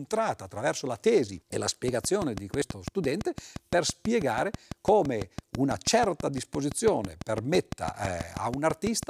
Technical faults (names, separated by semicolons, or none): train of clicks